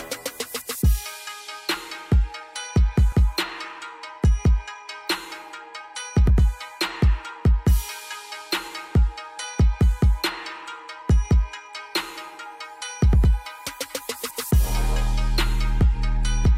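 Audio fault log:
No faults heard anywhere in this recording.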